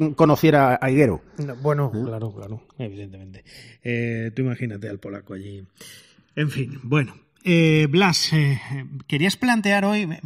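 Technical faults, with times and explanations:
Throughout: channels drifting apart. The two channels run on clocks about 100 ppm apart, so their offset slides to roughly 1 ms, sweeping comb notches into slow flanging.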